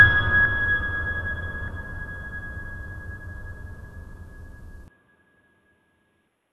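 Compressed frames skipped at 0.45, 1.67 and 3.84 s: whole blocks of the music were never decoded, so playback leaps forward by about 150, 100 and 70 ms, amounts that fit frames of roughly 26 ms. Overlapping frames smear each join into a soft blip rather than a click. From 4.88 s the input was likely switched to a poorer device. The music loses everything above 3.8 kHz and turns dull and boxy, with a new noise floor about 50 dB down, no gap and no level jump. At 6.27 s a larger skip drops around 0.4 s.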